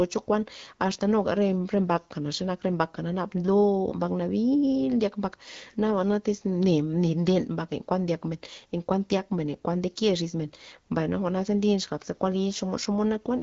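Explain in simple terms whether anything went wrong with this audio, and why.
Nothing went wrong with this speech recording. It has passed through the AMR wideband (HD Voice) phone codec, which leaves the sound slightly processed and contains nothing above about 7.3 kHz, as expected for that kind of call audio.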